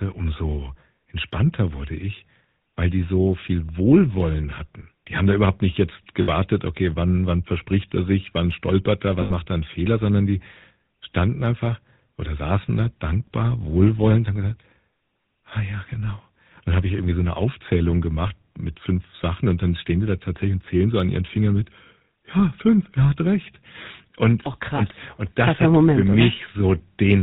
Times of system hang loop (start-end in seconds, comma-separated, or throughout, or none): none